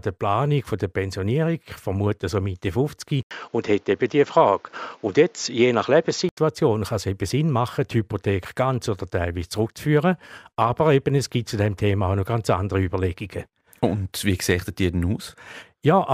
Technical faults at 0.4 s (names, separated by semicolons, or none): none